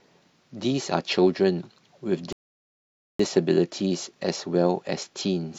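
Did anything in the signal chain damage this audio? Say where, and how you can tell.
Yes, at the playback stage: a rebuffering stall from 2.33 s to 3.19 s. The speech halts into silence for about 0.87 s, then picks up exactly where it stopped. Unlike a network dropout, no audio is missing; the player simply waited for data, adding time.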